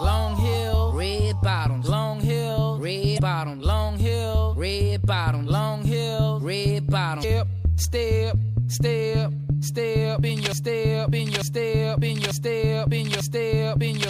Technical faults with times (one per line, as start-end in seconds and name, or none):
3.15-3.19 damaged data in a compressed stream
7.20-7.24 damaged data in a compressed stream
10.52-14.09 broken-record loop